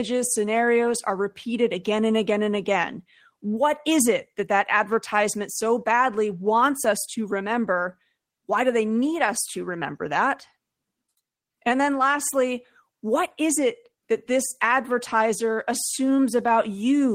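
No technical faults are audible.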